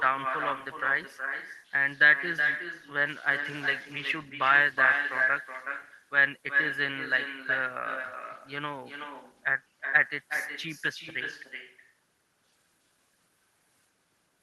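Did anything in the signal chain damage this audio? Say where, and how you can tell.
Yes. Throughout the speech, each phrase is trailed by a quieter, thinner copy, about 7 dB down and around 400 ms late. This is echo with no canceller at the call-processing stage: the far end's loudspeaker feeds its microphone, and nothing subtracts that return before it travels back through the call path.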